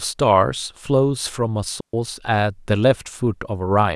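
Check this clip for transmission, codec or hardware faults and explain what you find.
There's one fault: a digital wireless dropout from 1.80 to 1.94 s, where the receiver lost too much data and muted for about 132 ms, leaving a clean silent gap with no noise burst.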